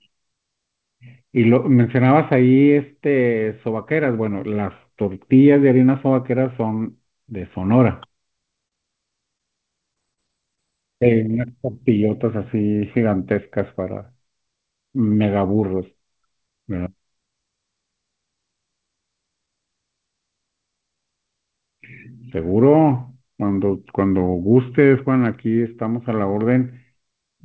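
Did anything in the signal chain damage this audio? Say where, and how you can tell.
Yes, at the network and jitter buffer. A short stall from a late packet occurs at 8.68 to 8.74 s and again at 9.38 to 9.42 s. The speech holds unnaturally long there. The receiver stretched the last sound by 39 ms, then 20 ms, while waiting. Nothing is skipped.

Repeated packet loss gives a robotic sound from 9.94 to 10.59 s. There are four gaps, the longest 34 ms. About 80 ms of speech is missing, and 95 ms of patched-in repeated sound covers roughly 15% of that stretch. The result is choppy, with pieces missing.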